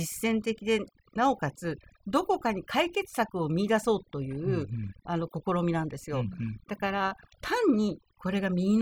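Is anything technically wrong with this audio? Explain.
Yes. The speech suffers from overdone noise removal, and it runs for the whole clip. A noise reduction stage was pushed too hard. It pulls individual frequency bands down, or cuts them out, whenever they sit close to its noise estimate. Quiet parts of the voice get caught in that and removed as well. Between phrases the background drops and breaks up into small twinkling specks.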